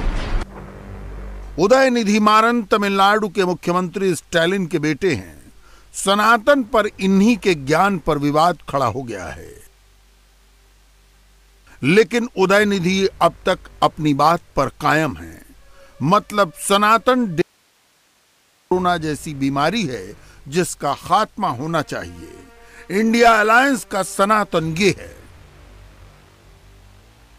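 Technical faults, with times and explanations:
17.42 to 18.71 s, audio dropout to a faint residue: the sound cuts off abruptly mid-flow and for about 1.3 s nothing remains but a low hiss, roughly 40 dB below the normal level, before the signal snaps straight back. There is no fade either side, so it cannot be a natural pause. The likely cause is a brief loss of the incoming signal while the stages after the break stayed live, passing on only their own noise.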